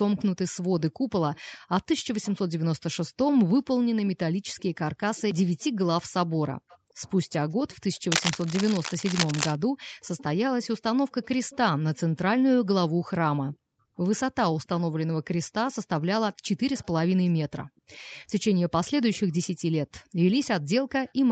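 Speech recorded over a call carries an echo leak: a faint copy of the talker returns about 438 ms late, roughly 25 to 35 dB below the speech, at 0.17–0.24, 1.35–2.34, 4.08–8.0, 10.01–12.0, 13.54–14.68, 16.33–18.15, 19.13–19.18 and 21.07–21.13 s. The likely cause is a far-end loudspeaker whose echo canceller let some of the microphone pickup through. From 8.10 to 9.56 s, cable scratch noise adds dense, uneven crackling only a few dB below the signal. This is likely a worn cable, connector or control being moved and changing its contact resistance.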